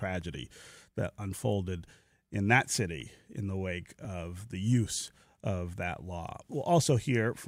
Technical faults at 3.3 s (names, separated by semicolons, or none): none